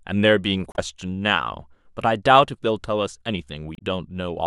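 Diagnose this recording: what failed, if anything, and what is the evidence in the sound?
Two brief disruptions break into the speech, at 0.72 s and again at 3.75 s, each lasting about 70 ms. This is damaged data in a compressed stream at the codec stage: corrupt frames make the decoder lose sync and jump to the next valid header.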